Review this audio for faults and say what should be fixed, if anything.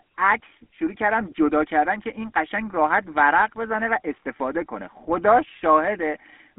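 The speech has GSM full-rate codec damage from start to end: a buzzy, gravelly roughness from the pulse-driven vocal-tract model, consistent with a 13 kbps full-rate coder. On a spectrogram, energy sits roughly between 200 Hz and 3.5 kHz, with nothing above 3.8 kHz. To prevent it, capture or transfer the speech over a wideband path instead of a GSM phone link.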